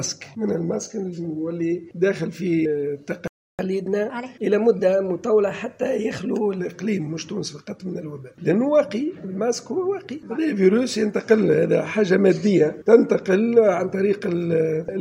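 At 3.28 s the audio drops to silence and stays out for about 314 ms, picking back up at 3.59 s. That's a playback stall, most likely the player starving for data or its thread getting blocked for a moment before it recovered. Straight after, from 3.59 to 6.59 s, you get catch-up at higher speed: the player runs the backlog 1.1 times fast by resampling, so pitch rises by roughly a semitone and a half for those three seconds, then settles back to normal.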